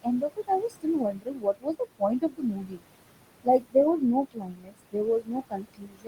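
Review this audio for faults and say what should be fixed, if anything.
Noise suppressor artifacts run through the whole clip. The suppressor pulls down every band it judges to be steady noise, frame by frame, cutting the background by about 21 dB. The room noise, sitting about 12 dB below the speech, drops away between phrases and returns beneath them. Steady room noise alone would keep a constant level, so this pumping points to the processing. To prevent it, ease the suppression depth and smooth its gain over time.

Speech cut by the noise suppressor also occurs, in five stretches: 0.02 to 2.02 s (about a second of it affected), 2.2 to 2.85 s (about half a second), 3.44 to 3.75 s (a short portion), 4.26 to 4.74 s (somewhat under half a second), and 4.92 s to the end. Quiet consonants and endings are treated as noise and sink by about 22 dB (about 21 dB at 4.26 s), so they sound swallowed. 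Dropouts would cut the sound entirely, but here the loud parts survive and only the soft detail fades. To prevent it, raise the speech-protection threshold so faint speech isn't classed as noise.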